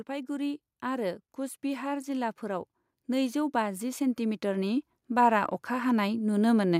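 From 0.06 s to 6.75 s, the level climbs steadily. This is automatic gain rising. The gain control judged the input too quiet and kept turning it up. The total increase is about 14 dB across nearly the whole clip. The speech grows louder as it goes. The background noise rises with it, at the same rate. Nothing jumps. The swell is slow and even, so the room sounds closer and noisier by the end.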